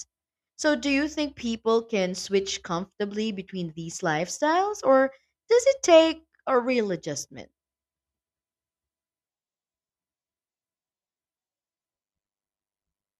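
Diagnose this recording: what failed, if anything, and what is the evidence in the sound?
A frame-based processing stage, probably call-side enhancement or codec resynthesis, is recombining windowed frames with an overlap that doesn't sum to constant gain, producing overlap-add ripple. From 12.03 s to the end at 13.2 s, the speech level dips by about 60 dB once per frame, roughly 100 times a second, heard as a metallic buzz with extra tones around the voice.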